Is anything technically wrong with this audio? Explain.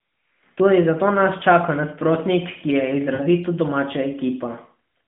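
Yes. Just after "čaka nasprotnik ki je", from 3.14 to 3.25 s, the speech smears into a drawn-out, fading buzz before recovering slightly rough. These are lost AMR speech frames: about 60 ms failed their checksum, consistent with three 20 ms frames, so the narrowband decoder repeated its last good pitch and vocal-tract settings at falling gain. The surrounding audio carries AMR-NB's narrow 150 Hz to 3.5 kHz line band.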